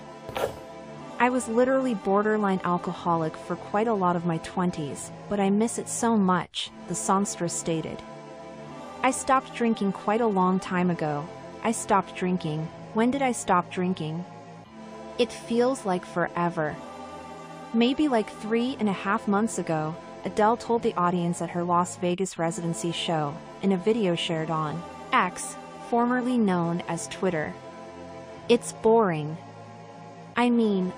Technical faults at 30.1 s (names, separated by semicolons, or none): none